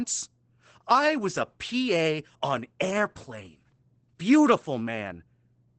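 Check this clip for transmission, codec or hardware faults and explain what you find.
One codec fault runs through the whole speech clip: Opus voice compression. The content stops at about 8.9 kHz, which points to Opus in wideband SILK mode at a low rate, around 12 kbps with 20 ms frames. SILK models the voice with linear prediction and codes the excitation coarsely at this rate, so the damage is plainly audible. The voice sounds muffled and dull, with a hoarse, slightly robotic edge.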